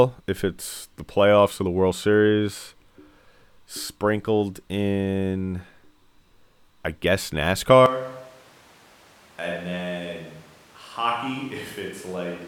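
Switch to a distant microphone at 7.86 s, after "I guess", through the end: the close microphone likely dropped out, so speech turns hollow, roomy, about 10 dB quieter and noisier.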